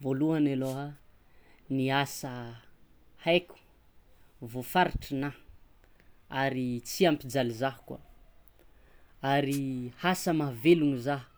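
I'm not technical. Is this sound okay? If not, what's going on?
No, not quite. At 0.62 to 0.79 s and again at 9.50 to 9.60 s there's a short swish of static over the speech: a wireless microphone noise hit. The radio link from the mic briefly faded, so the receiver's own hiss broke through.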